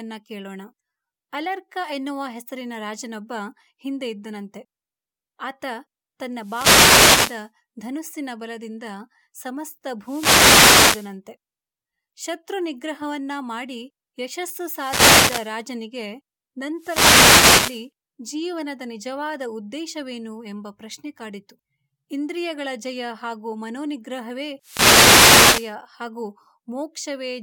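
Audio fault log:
6.38–7.49 s, 10.01–11.16 s, 14.63–15.60 s, 16.75–17.89 s, 24.60–25.76 s: wireless microphone noise hit, five events of roughly one second each. The analogue FM radio link from the microphone drops in strength as reflected paths arrive out of phase and cancel the direct signal. With less carrier reaching the receiver, its own noise floor comes up through the demodulated output and masks the speech, heard as a swish of static.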